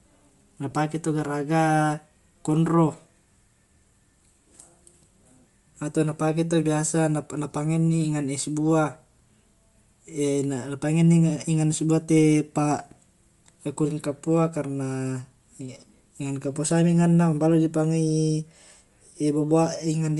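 Across the whole recording the speech carries a breathy, grainy edge in its upper range, where fine detail has been thinned out and replaced by a noise-like texture rather than simply cut off. That points to likely Bluetooth LC3 compression, with the codec's short transform frames (consistent with 7.5 ms) and a rate consistent with 48 kbps. The damage is plainly audible. Unlike a plain low-pass, the top end is still present, but as hiss-like filler instead of real detail.

At 0.71 s there is a brief smeared blip, about 15 ms long, from lost LE Audio frames. This fits two missing frames. The decoder covered the gap by reusing the last spectrum with scrambled phase, so the sound turns momentarily noisy instead of breaking up. That separates it from a hard dropout, which would leave a gap of silence, and from a click, which is a sharp, broadband tick.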